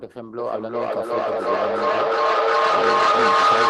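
From 0.39 s to the end, a feedback howl near 1.5 kHz builds with repeats about every 0.4 s, peaking about 11 dB above the speech, as a microphone-to-loudspeaker loop keeps gaining level.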